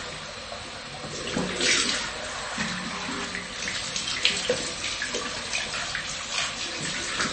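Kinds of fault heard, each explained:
MP3 compression: Nothing is heard above 8.3 kHz, so the top end sounds dull. The damage is plainly audible throughout, with a watery, swirly quality. This is likely a low-bitrate MP3 encode, which fits roughly 30 kbps, cutting treble and dropping weak detail between frames.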